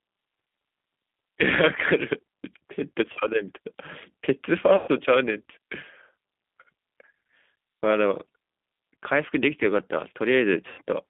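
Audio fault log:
Throughout: G.729 codec. Speech is confined to roughly 200 Hz to 3.6 kHz and rebuilt from filter and pulse models, fitting 8 kbit/s. The result sounds rough and synthetic. A spectrogram shows a hard ceiling near 3.6 kHz with smeared harmonics.
3.13–3.18 s, 4.76–4.89 s, 10.69–10.81 s: VoIP packet loss concealed by the speech codec. Gaps of about 30, 120 and 90 ms are filled with extrapolated, fading sound. A spectrogram shows a frozen, decaying spectrum, and the waveform shows a shrinking envelope.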